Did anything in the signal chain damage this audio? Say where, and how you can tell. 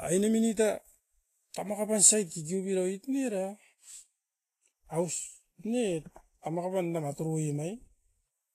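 Yes, at the codec stage, and the damage runs through the whole clip. The speech shows a hard ceiling at 14.2 kHz with nothing above it, and the treble beneath that ceiling is hissy and grainy, with sibilants smeared and consonant attacks softened. That pattern is most likely Vorbis compression at a low setting, consistent with a bitrate around 30 kbps: the encoder trims the top band and quantises the remaining high-frequency detail so coarsely that it turns into noise.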